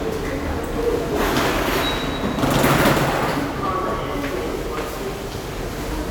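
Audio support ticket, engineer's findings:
No faults found.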